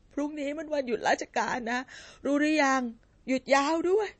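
From start to finish the speech has a hard ceiling at about 8.3 kHz, a clean shelf on a spectrogram, with weak upper detail flickering in and out as speckled holes. This is likely MP3 compression at a low bitrate, around 32 kbps, giving a watery, swirly edge and smeared attacks.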